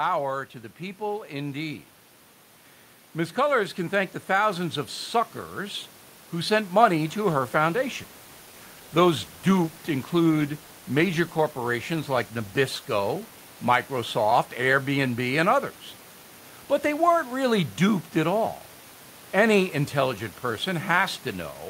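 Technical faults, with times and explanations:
3.13–4.85 s, automatic gain rising: the automatic gain control judged the input too quiet and pushed its gain up by about 4 dB over roughly 1.7 seconds, ending just before "suckers who sent money". Because the boost is applied to the whole microphone signal, the voice and the room noise beneath it, normally about 23 dB below the speech, swell together in a slow, even ramp rather than a sudden jump.
7.23–12.95 s, call bitrate drop: after "suckers who sent money", the call's bandwidth estimate fell and the encoder was told to spend far fewer bits, which fits a fall from around 64 kbps to about 24 kbps. The starved bitrate holds for about 5.65 seconds. With fewer bits the codec quantises more coarsely and trims the top of the spectrum, so the sound turns rough, watery or duller until the bitrate climbs back.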